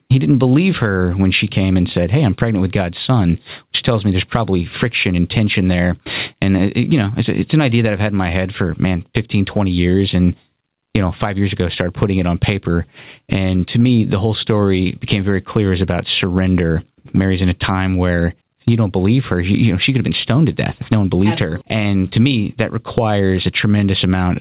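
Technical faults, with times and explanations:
Throughout, gain pumping: the input gain was likely set far too high, so a fast limiter clamps down on every loud sound. The gain swings by roughly 20 dB, leaving the audio squashed, heard through a narrowband call path with nothing above 4 kHz.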